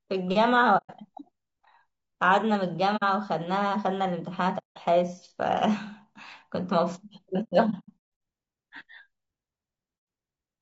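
The speech sounds rough and grainy throughout, with noise filling the gaps between harmonics and a thin, synthetic top band. That is likely low-delay AAC compression of the AAC-ELD kind. Its short frames resolve pitch poorly, and the damage fits a low bitrate near 32 kbps.

AAC frame loss with muting leaves soft-edged holes at 0.77 to 0.91 s, 2.96 to 3.03 s, 4.58 to 4.78 s, and 9.98 to 10.07 s. From 7.43 to 8.01 s, 420 ms of gaps are scattered, the longest around 150 ms. Lost frames decode as silence. Overlapping windows fade the sound out and back in.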